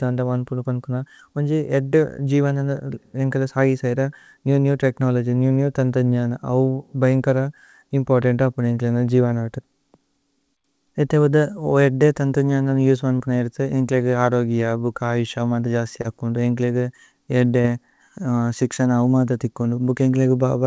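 Short concealed packet loss occurs at 13.18 to 13.22 s, 16.02 to 16.06 s and 17.62 to 17.66 s. Each time about 20 ms of audio arrived too late, and the receiver patched the gap by extending the preceding sound before blending back, leaving a brief smear or wobble.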